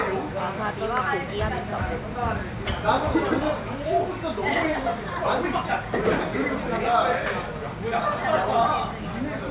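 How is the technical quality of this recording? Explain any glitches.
No technical glitches can be heard anywhere in the recording.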